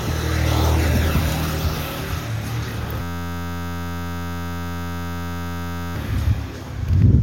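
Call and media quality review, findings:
System hang loop, 3.02–5.96 s: steady buzz at 86.1 Hz replacing the audio. Probable component: audio driver or host stalled while the device kept replaying one 11.61 ms ring-buffer segment, which fits a 512-sample buffer. Spectrogram: harmonic comb at 86.1 Hz spacing, flat in time. Waveform: one identical short cycle tiled for about 3 s.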